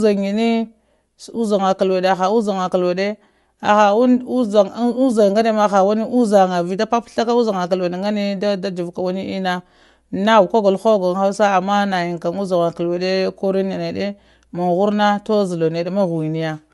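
Speech with plainly audible, grainy coding damage throughout and nothing above 11.5 kHz, likely Bluetooth LC3 compression; a spectrogram shows a sharp ceiling and blurred upper bands.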